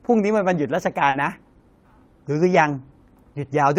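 Short concealed packet loss occurs at 1.09 to 1.15 s. About 40 ms of the speech arrived too late for the decoder, which filled the hole by extending the preceding sound and then blending back into the real signal. It is heard as a brief smear.

Lost packet rebuilt from error correction appears at 1.13 to 1.15 s and again at 2.53 to 2.55 s. Each spans 20 ms, which fits a single lost packet. The following packet carried a low-bitrate copy of it, so there is no gap, but those moments sound rougher and noisier.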